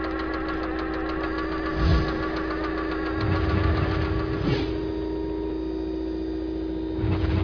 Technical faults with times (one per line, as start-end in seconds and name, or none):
none